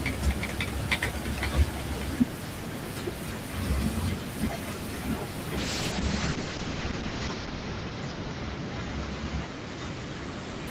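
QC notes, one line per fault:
5.59–10.71 s, call bitrate drop: at 5.59 s the speech loses its top end and turns rough and watery. The call's bandwidth estimate fell, and the encoder was pushed from about 32 kbps down to 8 kbps. With so few bits the codec quantises coarsely and narrows the audio band from around 20 kHz to 8 kHz. The harshest stretch lasts about 1.66 s, and the degraded sound continues to the end of the clip.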